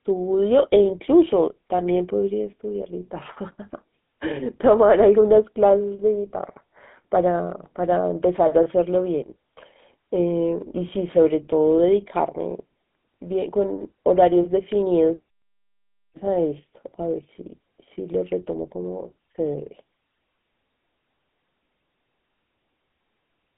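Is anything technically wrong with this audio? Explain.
Yes. GSM full-rate codec damage runs through the whole speech clip. The codec models the vocal tract and drives that model with a coarse, regularly spaced pulse excitation that keeps only a third of its samples, which fits the 13 kbps full-rate mode. The result is a plainly audible buzzy, gravelly roughness on the voice. The sound is confined to a telephone band of roughly 200 Hz to 3.6 kHz, with nothing above 3.8 kHz.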